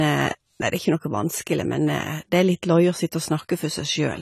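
From start to finish the speech sounds dull and smeared. Nothing reaches above 14.1 kHz. Sibilants and held sounds carry a fizzy, warbling texture. The likely cause is AAC compression at a low bitrate, around 32 kbps, coarsely quantising the spectrum and leaving gaps.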